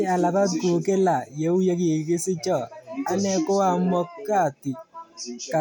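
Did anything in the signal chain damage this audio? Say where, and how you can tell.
No, nothing in the signal chain damaged this audio.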